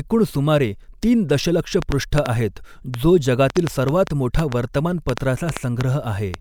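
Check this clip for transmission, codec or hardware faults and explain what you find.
Two faults are present: a train of clicks running through most of the speech, and one corrupt frame decoded in the middle of it.

From 1.82 s to 6.35 s there is a train of clicks, likely from electrical interference or an unstable interface injecting short pulses. About twenty similar clicks arrive unevenly, averaging 3.8 per second, and are heard as sharp ticks well above the speech, including in pauses.

At 3.57 s a corrupt frame decoded: a compressed frame with damaged bits was played anyway, so misread values put energy in the wrong frequency bands for roughly one frame. It is heard as a brief blip peaking at around -25 dBFS.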